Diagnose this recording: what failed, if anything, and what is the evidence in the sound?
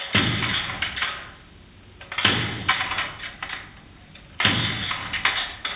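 The gain pumps over the whole clip, swinging the level by something like 15 dB. Loud and quiet moments sit unnaturally close in level, so the sounds come across flattened. The likely cause is input gain set far too high for the microphone, with a fast limiter or compressor in the capture or call processing clamping the level on every peak and letting it recover in between. The call codec's band limit at 4 kHz is also audible.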